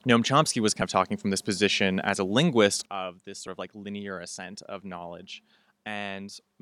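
At 0.82 s, just before "of talking from this", compressed frames were skipped: the decoder never received or rejected about two 32 ms frames, so roughly 70 ms of speech vanishes. At 2.86 s, right after "position as a linguist", a sudden gain jump is heard: the speech and its background noise drop together by about 12 dB from one instant to the next and stay down to the end. This is likely a digital gain setting or bit shift applied without any ramp. At 3.47 s, another two frames, about 70 ms, are lost the same way, producing a second skip in the now quieter speech.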